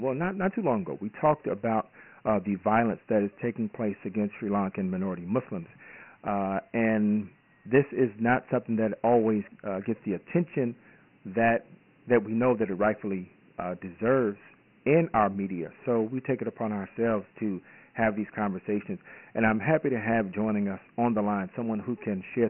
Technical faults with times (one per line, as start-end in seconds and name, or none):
0.00-22.49 Dialogic VOX ADPCM